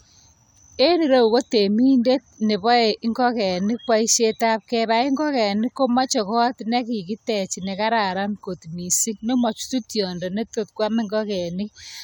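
A speech recording with nothing technically wrong with it, so there are no times or causes to give.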